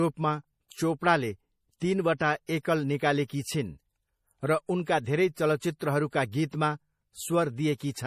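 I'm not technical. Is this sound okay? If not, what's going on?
No. MP3 compression damage runs through the whole recording: the speech sounds watery and swirly, and nothing is heard above 15.1 kHz, likely from heavy squeezing.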